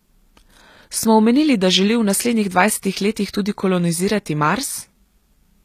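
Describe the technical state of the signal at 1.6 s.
At 1.6 s, as throughout the clip, the speech carries likely HE-AAC compression. Only the lower spectrum is coded, and the treble is regenerated by copying lower bands upward, which fits a bitrate near 24 kbps. The synthetic highs misalign with the real harmonics, leaving s sounds plainly gritty and lispy.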